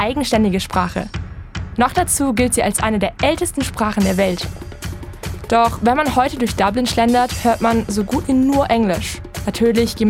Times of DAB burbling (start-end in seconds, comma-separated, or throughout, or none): 4.38-4.89